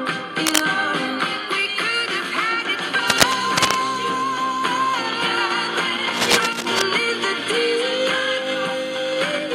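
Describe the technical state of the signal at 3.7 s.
A worn cable or connector was likely being moved, its contact resistance jumping erratically, producing cable scratch noise from 3.10 to 3.77 s: ragged scratching bursts roughly as loud as the sound itself.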